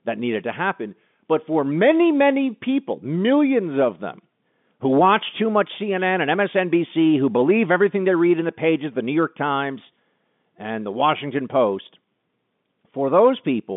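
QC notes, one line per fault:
No faults heard; ordinary telephone-band speech, 200 Hz to 3.6 kHz.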